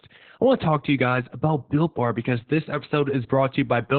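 Heavy Opus voice compression runs through the whole speech clip: nothing above 4.4 kHz, and that muffled, hoarse, faintly robotic tone fits narrowband SILK near 8 kbps.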